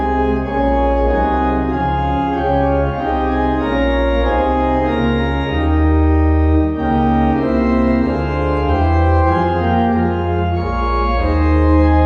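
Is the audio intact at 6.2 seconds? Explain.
Yes, at 6.2 seconds the audio plays through cleanly, with no dropout, click, distortion or other fault to be heard at that point.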